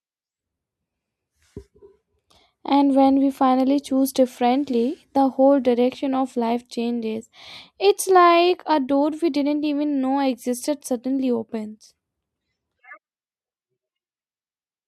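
No technical faults can be heard anywhere in the speech recording: the signal stays continuous and steady in level throughout.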